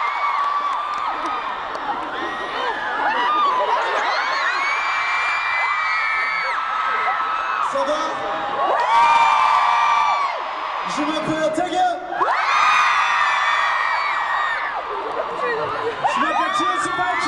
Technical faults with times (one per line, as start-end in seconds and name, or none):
none